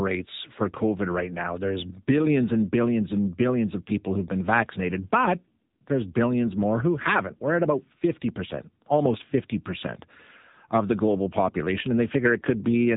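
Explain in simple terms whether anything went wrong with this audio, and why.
The speech has been through an AMR narrowband mobile codec, the kind used on older mobile phone calls. From start to finish, nothing above about 3.8 kHz comes through, so the voice sounds dull and boxy. Unlike a plain telephone-style filter, which only cuts the high end, the voice here also sounds buzzy and artificial. The codec rebuilds the voice from a simplified model instead of passing it through, and at this low quality that damage is plainly audible.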